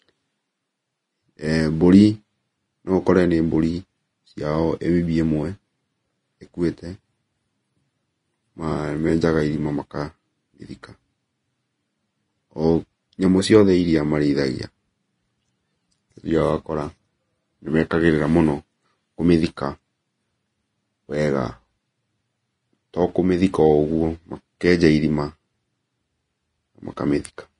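Throughout, the speech sounds hissy and grainy with nothing above 10.6 kHz, likely Vorbis compression at a low bitrate, around 30 kbps, coarsely quantising the treble into noise.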